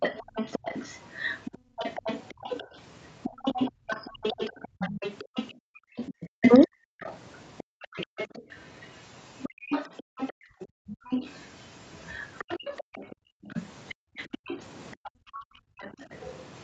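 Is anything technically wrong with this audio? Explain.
Yes. A second, fainter voice sits under the talker from the start to 16.28 s, roughly 20 dB below the main speech. This is the other side's voice leaking through. The other party's audio was most likely played on the talker's loudspeaker and picked up again by the microphone, and the echo canceller did not strip all of it out. That leaves a residue of the far end that follows along throughout.

The room sound also repeatedly sinks and comes back: briefly at 0.24 to 0.35 s (about 15 dB) and 1.58 to 1.77 s (about 20 dB), then in longer, deeper stretches at 3.31 to 5.96 s, 6.99 to 8.17 s, 9.49 to 11.1 s and 13.15 to 16.0 s, where it falls by about 40 dB. This is background gated by the echo canceller. While the loudspeaker was active, the canceller clamped the microphone level, so the ambience vanishes and then reappears when it releases.

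Between 6.38 and 6.71 s the talker's own voice briefly dips away, dropping by about 40 dB for a fraction of a second. This is speech suppressed in double talk. Both sides were likely speaking at once, and the canceller could not tell the local voice from the loudspeaker echo, so it pulled everything down together and chopped out part of the talker. The whole clip is band-limited to 8 kHz by the Opus call path.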